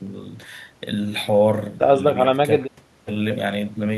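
No technical faults are audible in this speech.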